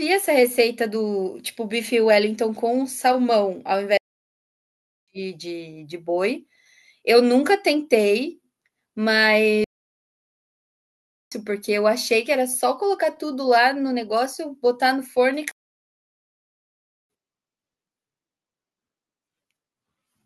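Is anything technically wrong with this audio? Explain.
Yes. The speech goes silent three times mid-flow: 3.97 to 5.08 s (1.1 s), 9.64 to 11.32 s (1.7 s) and 15.51 to 17.10 s (1.6 s). These are playback stalls. The player likely ran short of data or was blocked, so output stopped until it recovered.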